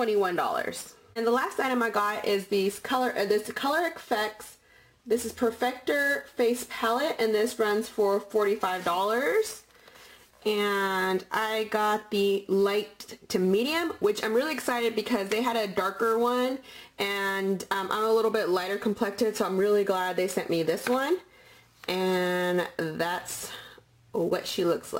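Sample clock jitter runs throughout: an unsteady converter clock, wobbling by around 10 microseconds, mistimes samples, adding hiss roughly 20 dB below the signal that swells on loud, bright passages.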